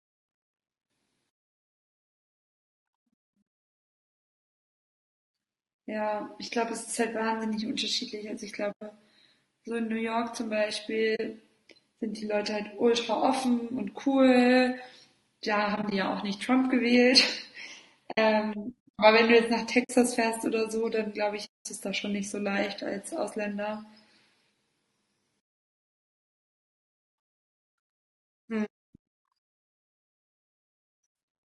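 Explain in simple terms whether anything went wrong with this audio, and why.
Something did go wrong, in two ways. Throughout, the speech was most likely squeezed with low-delay AAC compression, the kind used for video calls. Its very short chunks can't capture a voice's tone well, so the speech sounds rough, grainy and artificial, especially in the highs.

On top of that there is AAC frame loss with muting: pieces of the compressed stream went missing, and the player filled them with silence. Each gap fades out and back in softly. The dropouts fall at 8.71–8.82 s, 11.15–11.20 s, 15.75–15.92 s (several tiny gaps spread out), 18.11–18.18 s, 19.83–19.90 s, 21.45–21.66 s and 28.65–28.88 s. The last two, at about 0.2 and 0.3 seconds, are the longest.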